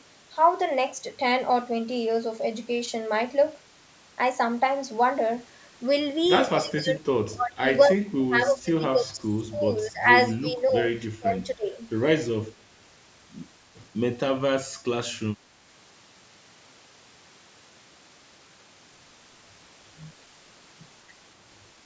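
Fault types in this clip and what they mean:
Speech suppressed in double talk: at 6.57–7.03 s, 7.33–7.64 s, 7.87–10.09 s, 10.37–10.8 s and 11.16–11.79 s the speech sinks sharply, by about 20 dB at its deepest and about 15 dB in the 10.37 s dip. The longest of these lasts around two seconds. This is likely an echo canceller that could not tell the near talker from loudspeaker echo while both ends spoke at once, so it turned everything down.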